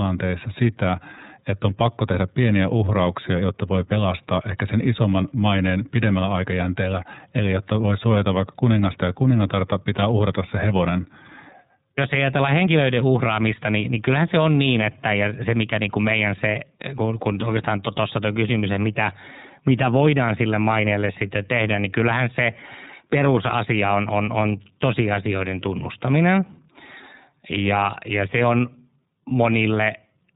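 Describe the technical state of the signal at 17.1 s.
At 17.1 s the speech carries iLBC codec coding, present across the whole clip rather than starting at this moment. The codec treats each short frame's excitation independently, here consistent with 30 ms frames at a rate that fits about 13.3 kbps. The result is plainly audible roughness and a slightly synthetic texture, and the band stops at 3.8 kHz, leaving the speech muffled and lacking sibilance.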